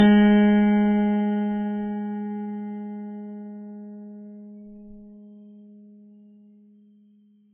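Throughout the music, nothing reaches above 8.4 kHz, and two layers of coding damage sound at once: a smeared, swirly haze plus a separate metallic warble. That mix, rather than one codec's uniform signature, marks likely transcoding between lossy codecs, perhaps low-bitrate AAC re-encoded as Vorbis.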